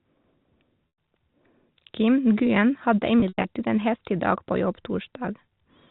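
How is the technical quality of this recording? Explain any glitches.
Two dropouts from packet loss with pitch repetition spoil the telephone-band speech, whose G.711 band limit shows as nothing above 4 kHz. The first is at 0.89–0.92 s, where about 100 ms of audio went missing. The second runs from 3.20 to 3.44 s, with 140 ms lost in bursts over 240 ms and the longest run lasting 100 ms. Both fit 20 ms packets. The receiver looped the last pitch period and faded it, so each gap sounds like a held, buzzy tone that fades into silence before the speech returns with a short cross-fade. On a spectrogram this appears as frozen, evenly spaced harmonic stripes. In the waveform it shows as one cycle repeated and tapering.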